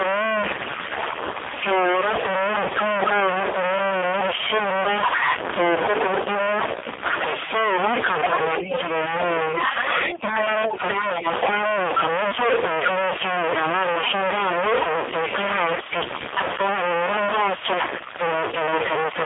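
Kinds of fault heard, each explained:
Stuck bit: There's noise riding on the voice the whole way through, and the gaps between phrases aren't clean either. They're filled with a hiss-like noise instead of going quiet. That combination points to a stuck bit, likely one data line or converter bit jammed at a fixed value, so roughly half the samples land off by that bit's weight and small values near silence get scrambled into noise.
AMR narrowband mobile codec: This is the classic phone-call sound of AMR-NB. Everything sits in a line band of about 300 Hz to 3.6 kHz, with nothing at all above 3.6 kHz, so the voice is thin and boxy. The damage is heavy: the voice comes across buzzy and synthetic, the way the vocal-tract model gets when it has very few pulses to work with, which fits one of the lowest modes, somewhere around 5 kbps.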